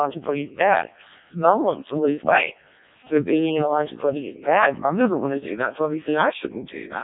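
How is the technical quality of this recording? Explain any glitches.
Technical quality is poor: the whole speech clip has passed through a Codec 2 vocoder, with heavy damage from start to finish. Codec 2 keeps only pitch, voicing, loudness and a coarse spectral shape, then rebuilds the voice from sine waves, so the original waveform is gone. The result is robotic, buzzy speech with nothing above about 3.8 kHz, and the crudeness fits the lowest 0.7 kbit/s mode. Ordinary low-bitrate codecs add warbling or smearing to a real waveform. This buzz comes from synthesis instead.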